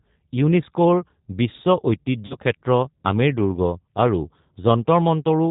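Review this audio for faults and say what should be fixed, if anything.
G.729 codec damage runs through the whole speech clip. The coder rebuilds each 10 ms frame from a vocal tract filter, a pitch predictor and a few pulses, and nothing above 4 kHz gets through. The result is a dull, band-limited voice with a rough, slightly synthetic edge, plainly audible throughout and consistent with G.729A at 8 kbit/s. To prevent it, carry the call on a wideband codec such as G.722 or Opus instead of G.729.

VoIP packet loss concealed by the speech codec occurs from 2.26 to 2.36 s, just after "ইউনেস্কোৰ বিশ্ব" and before "ক্ষেত্ৰ আমেৰ দুৰ্গ আৰু". About 40 ms of audio went missing, which points to two lost packets. The decoder filled the gap by extending its last pitch and filter settings with falling gain, giving a stretched, fading sound. Because each frame depends on the one before, the distortion persists briefly after packets resume. 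To prevent it, reduce network loss and use a jitter buffer with forward error correction or redundancy.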